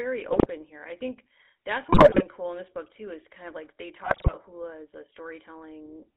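From the start the whole clip carries the GSM full-rate codec: speech confined to roughly 250 Hz to 3.5 kHz with a buzzy, gravelly edge, consistent with the 13 kbps full-rate coder. It models the vocal tract and rebuilds the excitation from sparse, regularly spaced pulses. On a spectrogram, energy stops sharply at 3.5 kHz and harmonics look smeared and grainy.

GSM bit errors strike three times. From 0.31 to 0.47 s, just before "here I think that's", corrupted filter, pitch and gain values make the decoder squawk and pop. A longer, harsher burst runs from 1.92 to 2.23 s, between "here I think that's" and "cool in this book". The third, 4.04 to 4.32 s, falls between "kind of like they" and "hula as a". On the waveform each burst shows blocky, frame-length jumps in level. On the spectrogram the spectral shape abruptly warps or brightens for each damaged frame.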